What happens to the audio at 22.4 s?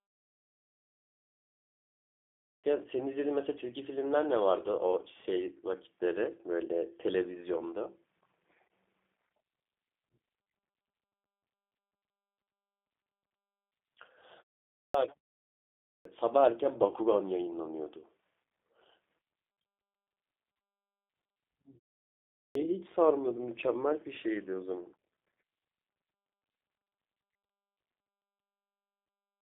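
Right at 22.4 s you're in the middle of a clipped start after a pause. After roughly 0.6 s of quiet, the output path has gone idle and takes time to come back, so about 250 ms of sound, from 22.3 to 22.55 s, never gets played. The talker comes in abruptly out of silence, with the front of the first sound shaved off rather than building up naturally.

On top of that, the G.729 codec (the G.729A flavour, running at 8 kbit/s) colours that moment like the rest of the clip. It models speech as a vocal tract filter plus a pitch predictor and a few pulses per frame, so what survives sounds a bit rough and synthetic. The line is limited to about 250 Hz to 3.5 kHz, with nothing above 3.5 kHz, which makes that re-entry sound thin and boxy as well as cut short.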